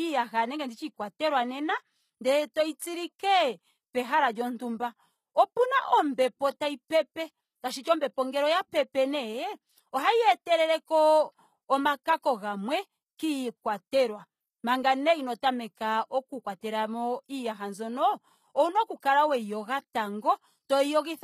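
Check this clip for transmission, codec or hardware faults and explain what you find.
Two codec faults are present: HE-AAC compression across the whole clip and five brief pre-echoes.

Throughout the speech, the treble has the coarse, metallic sheen of HE-AAC compression, likely at a low bitrate near 20 kbps. The top band is rebuilt from copied lower bands rather than coded, so sibilants sound gritty. A spectrogram shows blocky, smeared high bands and nothing above 14.9 kHz.

Pre-echo occurs at 7.83–7.85 s after "ombepo tayi pepe", 12.03–12.06 s, 16.59–16.63 s after "inoo tameka oku", 19.00–19.02 s after "owuna oku", and 19.93 s. Noise spread across each transform block leaks ahead of sharp onsets as a short hiss lasting 15 to 34 ms. On a waveform this appears as low fuzz just before each attack.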